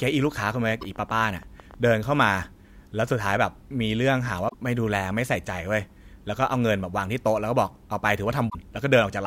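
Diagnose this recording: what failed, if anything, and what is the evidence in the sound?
From the very start of the speech, 0.02 s to 1.75 s, a train of clicks sits over the audio at about 8.5 per second, unevenly spaced, roughly twenty in all. They are near the level of the speech itself and are audible in the gaps as well. The repeated, similar pulse shape points to something outside the program injecting impulses, likely electrical interference in the analogue wiring or a faulty connection or power supply.

Three short blips mark damaged data in a compressed stream, at 0.78 to 0.83 s, 4.48 to 4.54 s and 8.46 to 8.55 s, each lasting 50 to 90 ms. This is a codec or storage fault. Corrupted bytes make the decoder misread or drop frames, lose sync and hunt for the next valid header, and that produces the brief disturbance at each spot.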